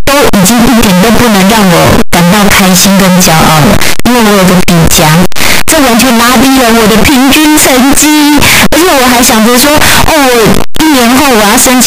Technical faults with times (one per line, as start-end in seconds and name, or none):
0.00-11.87 signed and unsigned mixed up